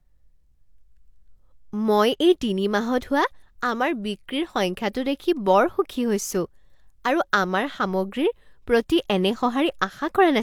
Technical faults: none

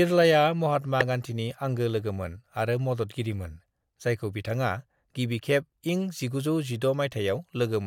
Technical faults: compressed frames skipped

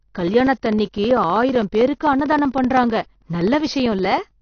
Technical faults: AAC compression; periodic USB or driver dropouts

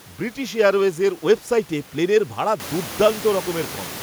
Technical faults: none

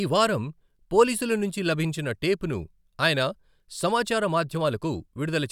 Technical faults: none

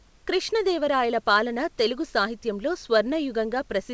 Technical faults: none

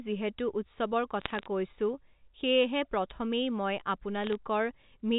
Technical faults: bit errors on a digital phone line

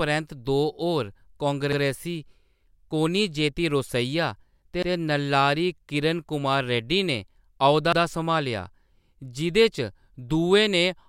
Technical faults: overlapping chunks

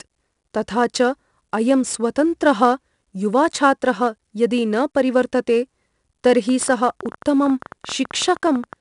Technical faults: 4-bit ADPCM compression; train of clicks

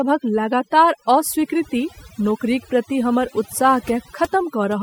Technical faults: overdone noise removal

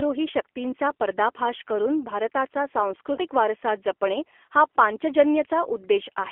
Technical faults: G.729 codec; VoIP packet loss concealed by the speech codec

